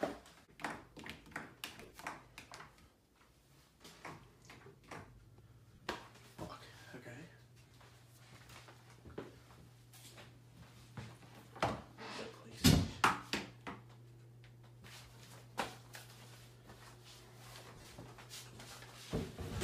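Lost LE Audio frames break up the sound at 1.81–1.92, 5.75–5.89, 7.67–7.71, 14.82–14.84 and 17.76–17.87 s, with gaps of 15 to 90 ms, consistent with 7.5 ms LC3 frames. The decoder repeats the last spectrum with scrambled phase, so tones smear into noise. On a spectrogram this shows as blurred, harmonic-less patches, and the waveform loses its regular periodicity there.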